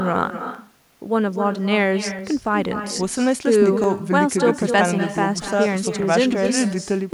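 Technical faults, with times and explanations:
Throughout: echo with no canceller. The far end plays the call through a loudspeaker that its microphone picks up, and nothing strips that copy out. Every phrase returns about a fifth of a second later as a thinner shadow about 8 dB below the speech.
0.55 to 7.13 s: clock drift buffer slips. A steady click recurs every 1.64 s, about five in all, while speech is present. The likely cause is two devices' clocks disagreeing by a couple of hundred parts per million, so the buffer periodically drops or repeats a handful of samples.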